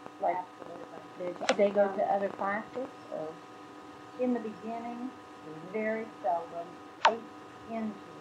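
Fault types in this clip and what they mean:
train of clicks: Something is injecting repeated short pulses into the signal, likely interference from nearby equipment or a faulty connection or power supply. From 0.06 to 2.86 s, about thirty similar clicks arrive unevenly, around 9.3 per second, popping roughly 10 dB above the sound.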